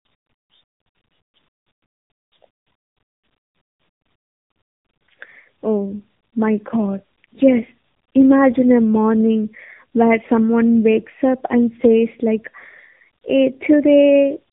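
From start to finish the speech carries tandem speech coding: it sounds as though it passed through several speech codecs in a row, with decoding and re-encoding at each hop, likely three separate coders ending in AMR-NB at a low rate. Every stage re-models the previous stage's errors, so the roughness and warble build up. Nothing remains above about 3.8 kHz, which leaves the speech muffled and grainy, with a watery warble.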